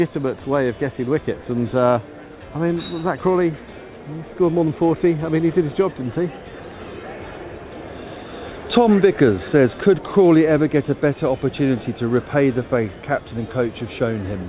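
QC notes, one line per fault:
The signal passed through a call path whose content stops at 4 kHz, the narrowband ceiling that fits a G.711 A-law link at 64 kbps, and it carries only that codec's ordinary coding noise.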